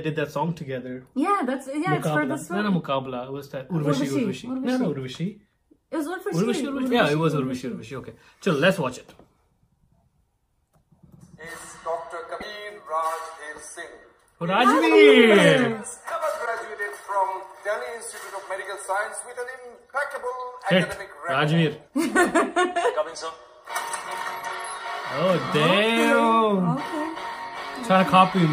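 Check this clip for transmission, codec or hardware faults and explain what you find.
Two short glitches stand out, at 12.40 to 12.43 s and at 16.45 to 16.48 s. Each lasts about 30 ms, roughly one 26 ms frame. The likely cause is a broken MP3 bit reservoir. Frames were lost, and the next frame reached back for borrowed data that was no longer there. It decoded bytes from the wrong frame instead. The sound skips forward, and the first frame after each gap comes out garbled.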